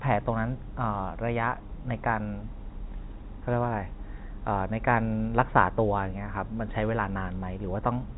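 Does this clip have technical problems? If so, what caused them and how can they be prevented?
No, nothing stood out as a problem on listening to this speech clip, so there is nothing here that needs preventing.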